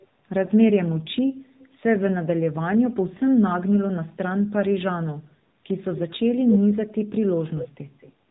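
Speech runs through the AMR narrowband mobile codec for the whole clip. Nothing above 4 kHz survives. The codec damage is plainly audible. The voice sounds buzzy and synthetic. That points to a low bit rate, around 7.4 kbps. At that rate the vocal tract model gets few pulses per 5 ms subframe, so fine detail is lost. The call's microphone processing trims only the deepest bass, and that is normal. From 0.46 to 0.51 s there is a lost AMR speech frame. It is heard as a short dip or warble. The gap is about 20 ms, which fits a single frame failing its checksum. The decoder then repeats its last pitch and vocal tract settings at reduced gain. The voice returns weak or rough right after. From 5.91 to 6.18 s a faint delayed copy of the voice appears. It trails the original by 221 ms. It sits roughly 15 dB below the speech. This is an echo leak. The likely cause is a far end playing the call on a loudspeaker. 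Its echo canceller let part of that sound pass from speaker to microphone and send it back.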